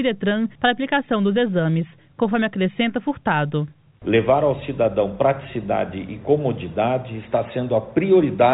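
Nothing is technically wrong with this clip, and the sound comes through the call path with no faults to report.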